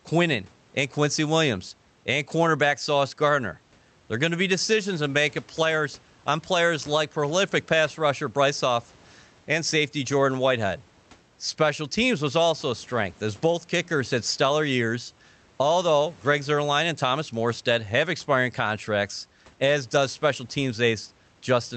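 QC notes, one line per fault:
No faults found in this speech clip; the Opus call path at 32 kbps with an 8 kHz band and room noise about 34 dB below the speech are both as expected.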